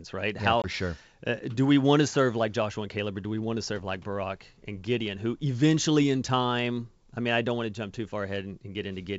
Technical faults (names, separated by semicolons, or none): packet loss on an ADPCM call